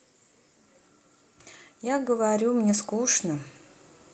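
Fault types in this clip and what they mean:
Automatic gain rising: the gain control judged the input too quiet and turned it up gradually, so the speech and the background noise swell together by about 8 dB over roughly 1.7 seconds, from 1.81 s to 3.52 s, instead of changing level abruptly.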